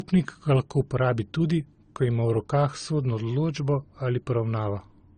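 Speech throughout shows transcoding between lossy codecs, likely a low-rate AAC encode re-encoded by Opus; the spectrogram cuts off flat at 9.6 kHz, with layered artefacts.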